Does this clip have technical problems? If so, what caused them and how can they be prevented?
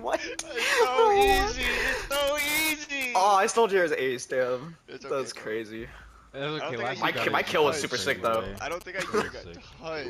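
Yes. GSM signalling bursts from 8.10 to 8.83 s: a nearby 2G phone's radio pulses, rectified by the audio circuit, form a galloping 217 Hz buzz, gated in clusters unlike steady mains hum. Keep mobile phones well away from microphones, cables and preamps, or switch them to flight mode.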